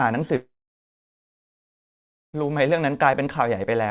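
At 0.36 s the speech breaks off into a brief fading buzz, then about 1.86 s of silence until 2.35 s, when the speech resumes with roughly two seconds missing. This is likely a long network dropout, with the receiver briefly extending the last sound before giving up.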